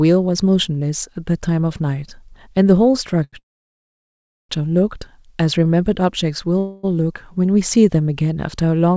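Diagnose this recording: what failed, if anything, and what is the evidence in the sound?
A short stall from a late packet occurs at 3.24 to 3.35 s, in the network and jitter-buffer stage. The last sound is held about 87 ms with a slight buzz or dip, then resumes exactly where it left off. Unlike a dropout, nothing is skipped; the timing simply slips.

A call audio freeze occurs at 3.39 to 4.51 s: a fading buzz or hiss, then about 1.08 s of silence. A shorter one at 6.59 to 6.85 s is filled with buzz or hiss for 0.25 s. In both, speech resumes without loss, so a gap has been inserted, likely from packets held up in transit draining the jitter buffer.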